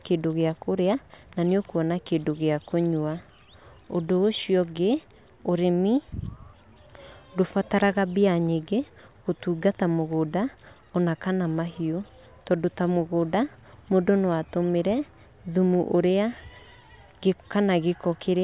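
No technical faults can be heard anywhere in the recording; the signal stays steady and intact throughout.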